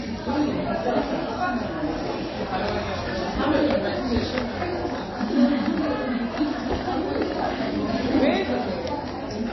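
From start to finish, the audio carries plainly audible damage, likely from MP3 compression. Nothing is heard above 5.8 kHz. The treble simply stops there. The encoder seems to have run short of bits, which fits a low bitrate near 24 kbps. It dropped the top band and discarded weak frequency detail. That detail flickers in and out between frames. The result sounds dull, watery and swirly throughout.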